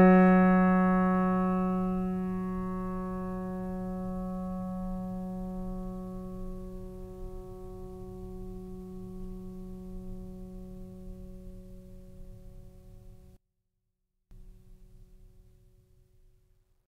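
At 13.37 s the music suddenly hollows out for just under a second, until 14.31 s. The level drops by about 29 dB, and the centred parts almost disappear. What's left is a faint residue of whatever differs between left and right. That's the signature of one channel inverted, likely a polarity flip on one side, so the shared content cancels when the two channels are summed.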